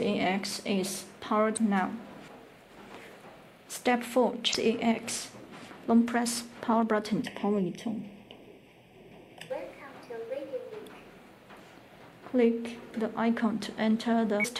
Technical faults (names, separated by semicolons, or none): damaged data in a compressed stream; channel delay (comb filtering)